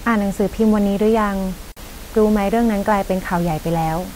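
At 1.72 s the speech drops into a 48 ms silence, a gap at a join of encoded pieces. Encoder delay and end padding survived joining, so sound resumes where it stopped.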